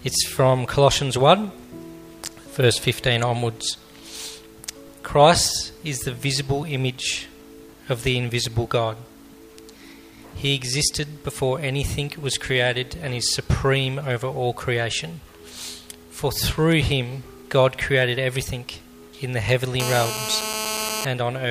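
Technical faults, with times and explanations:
19.80–21.05 s: GSM phone buzz, a steady, raspy 217 Hz buzz about 5 dB below the signal from rectified call bursts, harsher and higher-pitched than mains hum.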